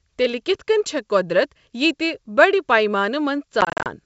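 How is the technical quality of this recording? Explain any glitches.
The recording is G.722 wideband audio at 64 kbit/s, and it has one glitch near the end: packet loss on an ADPCM call.

Between 3.61 and 3.87 s, about 150 ms of audio drops out in short gaps of up to 40 ms each, spread over roughly a quarter of a second. That fits around fifteen lost packets. The gaps are filled with silence. Because the decoder's adaptive predictor and step size lose track of the sender's, the sound comes back after each hole slightly distorted. On a waveform these look like flat, hard-edged notches. On a spectrogram they appear as blank vertical stripes.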